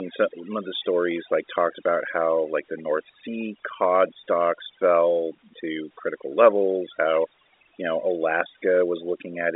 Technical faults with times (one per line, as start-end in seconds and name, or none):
0.00-9.55 overdone noise removal